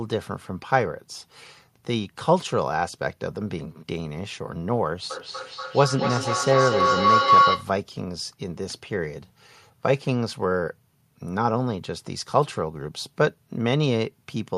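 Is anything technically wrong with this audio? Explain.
Yes, there's a feedback howl from 5.1 to 7.74 s. Two devices in the room form a loop that gains level on each pass, so the sound narrows to a tone around 1 kHz, pulsing roughly every fifth of a second and peaking about 7 dB above the speech.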